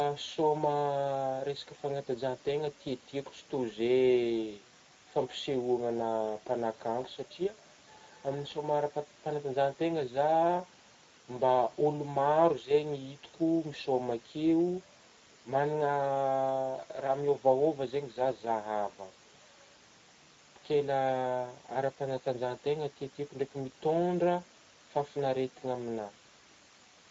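Speech runs through the Speex codec for the whole clip, leaving it plainly hoarse and grainy, with the upper band turned into hiss-like fill, which fits a rate around 16.8 kbps. That steady rasp, rather than the swirly warble of transform codecs, marks CELP coding. The room noise sits about 29 dB below the speech.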